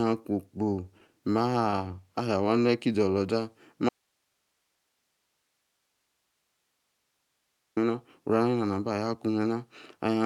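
From 0.64 s to 2.03 s the speech shows repeated stalls (stutter). Packets reached the receiver late or slower than playback, so the jitter buffer kept running dry. There are 23 short gaps, none longer than 20 ms, and the receiver filled each by extending the preceding sound, about 236 ms in all, or 17% of that stretch. Nothing is lost, but the speech drags and catches in quick hiccups.

At 3.89 s there is an audio dropout to a faint residue. The speech cuts off abruptly and stays gone for about 3.87 s, returning at 7.77 s. The gap is not silent. It holds steady hiss roughly 50 dB below the speech level. The likely cause is a break in the signal feeding the chain while everything downstream of it stayed live, passing only its own noise floor until the signal returned.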